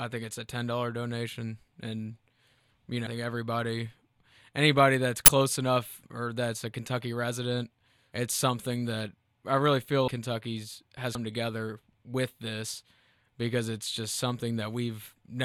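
Speech with compressed frames skipped at 3.05 s, 10.07 s (after "that I really feel") and 11.15 s (before "together with this because"). Roughly 150 ms, 200 ms and 200 ms of audio vanish. The decoder drops whole frames and the speech jumps ahead at each join, seen on a spectrogram as an abrupt content jump. At 5.26–5.28 s, between "anybody that's" and "enough or that's a", an uninitialised buffer plays leftover memory as a loud 23 ms digital-noise burst, which fits a 1024-sample buffer. It shows as a dense waveform block and a broadband spectrogram slab.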